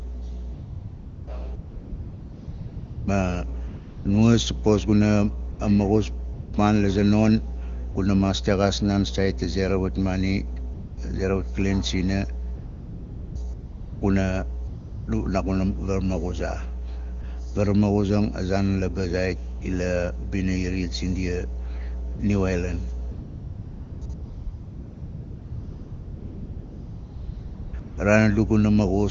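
A speech recording carrying mains hum for its whole length: a steady 60 Hz tone with low harmonics, sitting only about 10 dB below the speech. A ground loop or a nearby transformer is coupling the power line into the signal path, and at this level the hum is a serious defect rather than a faint background buzz. The speech also shows AMR comfort noise, with seventeen dropouts between 0.53 s and 27.97 s. They range from a single 20 ms blip at 17.22 s or 19.60 s up to a long stretch from 24.13 s to 27.73 s, with other longer patches at 1.55 to 3.07 s, 12.55 to 13.35 s and 23.11 to 24.01 s. In each, the phone judged the talker silent and stopped sending speech frames, and the receiving end substituted smooth synthetic noise for the real background. The fill switches in and out audibly, and quiet word endings near the gaps can be clipped. The AMR wideband (HD Voice) codec's speech coding itself sounds clean, which points to its highest rate, around 23.85 kbit/s.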